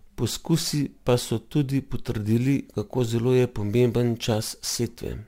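Throughout, crude rate conversion, likely 44.1 to 48 kHz by repeating samples, adds an inharmonic fizz roughly 25 dB down, visible as faint mirrored spectrogram streaks.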